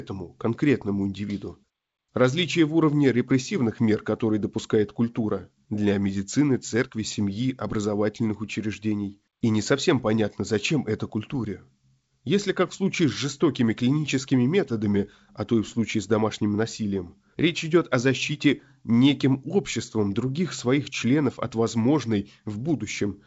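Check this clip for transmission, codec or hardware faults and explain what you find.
The speech comes through G.722 wideband coding at 56 kbit/s, with content extending to 7.7 kHz and only the light upper-band hiss and slightly coarser lower band that this coding mode produces, and nothing in the signal points to any problem beyond that.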